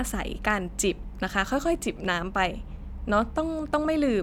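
Nothing here sounds technically wrong: the speech comes across steady and intact, with no faults to point to anywhere in the recording.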